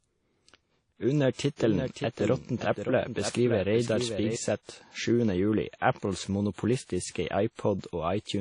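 Speech, with plainly audible coding damage throughout: the audio rings and washes, hiss breathes with the voice, and nothing remains above 10.1 kHz, most likely from WMA compression at a low bitrate, around 32 kbps. Long transform blocks spread quantisation noise over tens of milliseconds and zero weak spectral lines. From 1.58 to 4.36 s there is a doubled audio track. A full-band copy about 10 dB quieter follows roughly half a second behind, dry and with no room colour. It starts and stops abruptly, likely from a second, slower capture path or an edit holding two misaligned copies.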